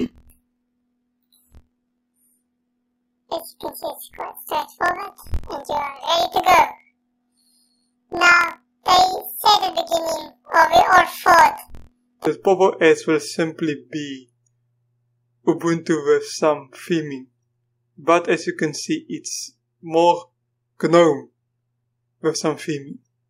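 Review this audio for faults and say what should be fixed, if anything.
From 0.0 to 12.28 s there is a planar audio read as interleaved fault. Each 24 ms block stores all left samples and then all right samples, but it is read as alternating pairs, so every block plays twice at double speed. The sound comes out an octave high with a flutter at 41.7 Hz. On a spectrogram, harmonics sit doubled in frequency with vertical striping every 24 ms, and the waveform shows repeated half-length segments. Tag the buffer layout explicitly and convert planar to interleaved before playback.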